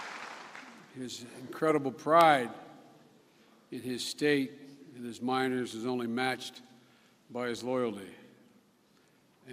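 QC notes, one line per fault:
No faults to note for this clip.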